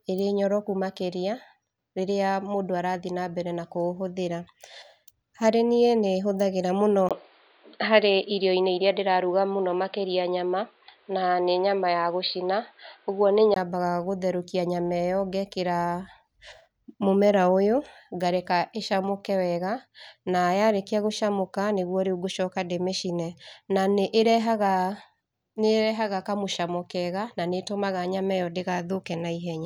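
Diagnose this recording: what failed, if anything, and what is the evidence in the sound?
At 7.09 s the speech drops out for 20 ms, then returns band-limited, with nothing above 4.8 kHz, a level shift of around 5 dB, and a different noise floor sitting roughly 40 dB under the signal. At 13.56 s the full bandwidth and original tone come back. This is at the capture device and driver stage: the input likely switched to a poorer device, a narrower-band microphone path with its own gain and self-noise, and then switched back.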